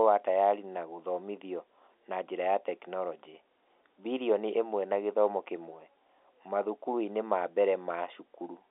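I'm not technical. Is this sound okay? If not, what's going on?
Yes, there's nothing wrong with this speech recording. It has the thinner, slightly boxy quality of an ordinary landline call because it went through normal G.711 telephone coding, which keeps only the middle range of sound and drops everything above about 3.8 kHz.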